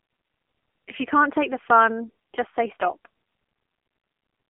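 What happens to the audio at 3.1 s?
At 3.1 s you're hearing the AMR narrowband mobile codec, which runs through the whole clip. The speech is squeezed into a phone band of roughly 250 Hz to 3.4 kHz, with nothing above 3.6 kHz. The heavy buzzy, synthetic texture points to a low mode, around 6.7 kbps.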